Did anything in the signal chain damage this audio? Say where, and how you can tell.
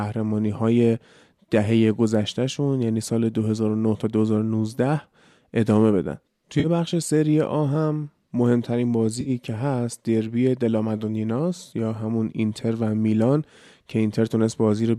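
Yes. The damage sits at the codec and network stage: AAC frame loss with concealment. Two brief patches of speech turn smeared and phasey, from 6.60 to 6.67 s and from 9.21 to 9.30 s. The gaps are about 40 ms and 50 ms, which fits a run of short low-delay frames going missing. The decoder is likely rebuilding each gap from the last good spectrum, so texture replaces detail. Neither gap is long enough to fade to silence.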